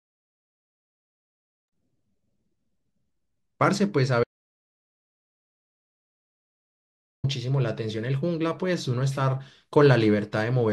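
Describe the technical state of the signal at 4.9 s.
The speech is gone at 4.9 s, inside a three-second audio dropout to silence from 4.24 to 7.24 s with no room tone, likely lost input recorded as silence.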